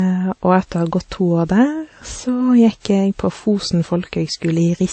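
Throughout, the speech carries layered swirly, smeared artefacts below a flat spectrogram ceiling at 8.3 kHz: likely transcoding between lossy codecs, such as low-rate MP3 re-encoded as WMA 1.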